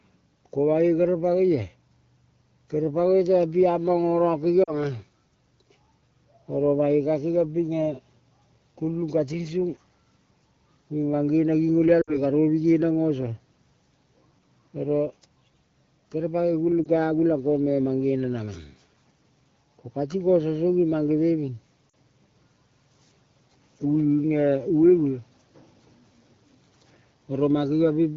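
Speech over a wideband phone link shows four brief dropouts from lost AMR speech frames. They fall at 4.63 to 4.74 s, 12.01 to 12.18 s, 16.84 to 16.88 s just before "ka agulang", and 21.89 to 21.94 s just after "mange veving". Each gap is 20 to 60 ms, which fits one to three 20 ms frames. The decoder fills each gap by repeating the last good frame at falling gain. The sound blurs or warbles briefly, then recovers.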